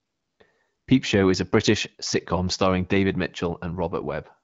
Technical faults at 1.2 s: none

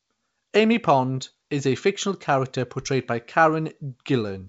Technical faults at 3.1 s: none

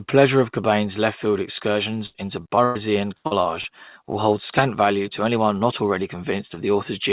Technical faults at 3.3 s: burst of packet loss; short concealed packet loss

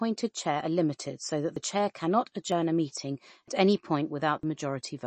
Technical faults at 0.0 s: MP3 compression

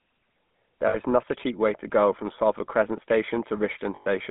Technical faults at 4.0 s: GSM full-rate codec; lost GSM frames

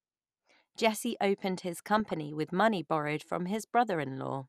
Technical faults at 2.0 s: MP2 compression; DAB burbling

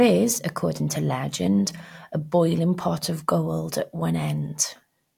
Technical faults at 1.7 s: none

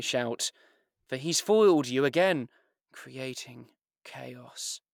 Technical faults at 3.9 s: none

